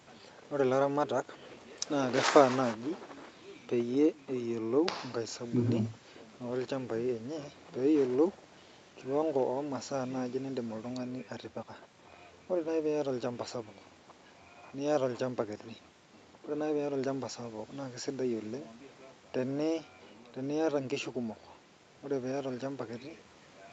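No technical faults heard.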